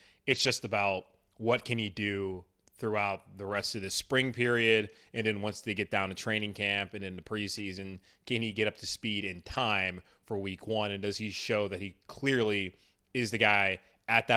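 Lost packets rebuilt from error correction appear at 0.31–0.49 s, 1.57–1.63 s, 3.49–3.55 s, 7.57–7.63 s, 8.51–8.53 s, 9.53–9.59 s and 12.43–12.45 s. Each time, the decoder played the low-bitrate redundant copy carried in the following packet, so the speech never drops out. Instead, those stretches turn briefly rough and grainy. The first event is the longest, about 100 ms of rebuilt audio, which fits five 20 ms packets. The rest are 20–40 ms.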